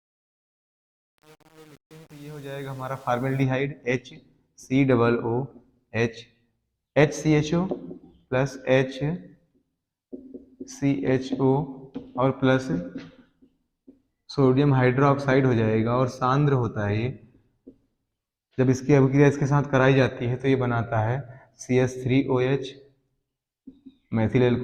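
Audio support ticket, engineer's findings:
Truncation distortion on the fade-in, 0.0 to 3.43 s. Gritty, stepped start, worst from 0.0 to 3.31 s. Gain stage without dither, consistent with 8-bit word length. Low-level waveform collapses into coarse square steps.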